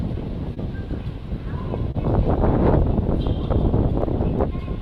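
From the start to the end of the clip, clock drift between sender and receiver runs underneath: the sender's clock is roughly 2 percent slow, so the receiver's buffer keeps draining and small, unevenly spaced timing hiccups recur. On a spectrogram these show as tiny smeared or repeated slivers at irregular points.

At 0.54 to 0.59 s comes a short stall from a late packet. The buffer ran dry, and about 25 ms of the last sound was stretched before playback resumed with nothing lost, heard as a brief held sound with a slight buzz or dip. A waveform shows a short, repetitive, flattened stretch, and a spectrogram shows frozen horizontal bands. The same fault recurs at 1.91 to 1.96 s, this time with about 30 ms held.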